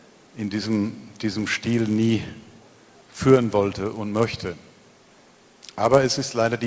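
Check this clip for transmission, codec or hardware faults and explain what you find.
There's one fault, running the whole way through: a resampler restarted on every block. The conversion, which sounds like 44.1 kHz down to 16 kHz, treats each 10 ms block in isolation, so every edge picks up a small error. Those edges land 100 times a second, giving a steady buzz at 100 Hz that sits on the sound whenever there's signal.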